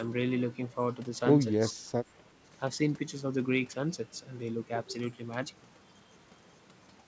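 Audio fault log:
1.73 to 1.80 s, speech suppressed in double talk: the voice briefly dips by about 15 dB for roughly 70 ms, then returns. The likely cause is the echo canceller, which could not separate the near talker from loudspeaker echo while both sides spoke and turned both down.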